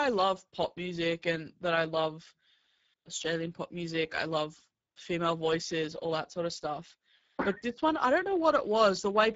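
Speex codec damage runs through the whole speech clip. The CELP coder has too few bits for its excitation, so the voice sounds noisy and hoarse, in a way that fits a bitrate near 10 kbps. Nothing is present above 7.7 kHz.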